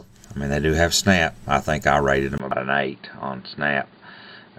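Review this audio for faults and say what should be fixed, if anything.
At 2.38 s, after a 20 ms gap, the sound turns dull with nothing above 4.7 kHz and a new noise floor about 40 dB down. This is likely an input switched to a poorer device. A spectrogram shows a hard ceiling from there to the end.

At 2.51 s, damaged data in a compressed stream causes a brief blip as the decoder loses sync. It appears as a sharp broadband streak.

To prevent both, lock the input device before recording and check stream integrity before decoding.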